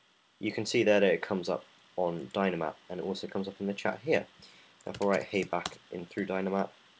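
No technical faults are audible in this clip.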